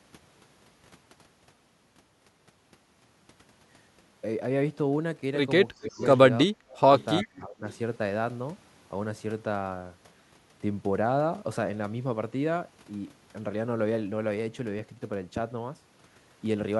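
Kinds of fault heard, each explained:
Speech suppressed in double talk: the speech dips by up to about 30 dB in three short stretches between 5.73 and 7.65 s, likely an echo canceller muting during simultaneous talk.
Echo leak: faint scraps of a copy delayed by 343 ms, about 25 to 30 dB down, near 5.83, 6.99 and 7.71 s, likely uncancelled loudspeaker echo returning.
CD scratch ticks: six very brief ticks, each under about 2 ms, between 14.18 and 15.19 s, roughly six per second, likely one uncorrectable disc blemish per revolution.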